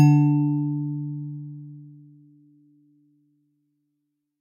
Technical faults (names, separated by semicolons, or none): none